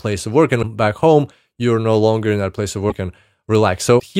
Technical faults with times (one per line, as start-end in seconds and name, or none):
0.62-0.65 broken MP3 bit reservoir
2.89-2.92 broken MP3 bit reservoir
3.99-4.01 broken MP3 bit reservoir